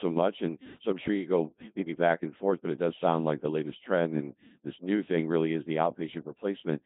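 The speech has been through the Codec 2 vocoder from start to finish. Instead of keeping the waveform, the codec transmits only pitch, voicing, energy and a coarse spectral envelope, and the decoder rebuilds the sound from sine waves. The damage here is heavy and fits a 2.4 kbit/s mode. The result is a robotic, buzzy voice with smeared detail, and nothing remains above 3.8 kHz, leaving the sound narrow and dull.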